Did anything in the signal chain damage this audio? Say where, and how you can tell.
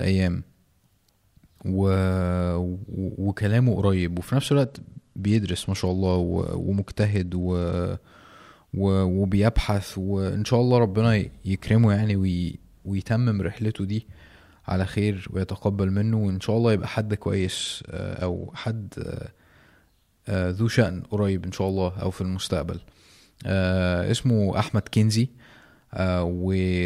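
Yes, a Bluetooth SBC bit pool drop in the codec: from 4.44 to 7.79 s and 17.31 to 18.72 s the treble dulls and gritty noise rises, which fits a bit pool cut to about 96 kbps.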